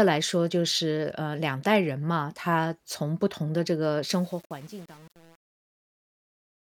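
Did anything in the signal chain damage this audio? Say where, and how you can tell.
Yes. Truncation distortion on a fade sets in from 4.07 s to the end at 6.63 s, as the speech fades out over roughly the last two and a half seconds. The tail turns gritty, which points to a gain stage truncating to about 7 bits with no dither, so the waveform collapses into coarse steps.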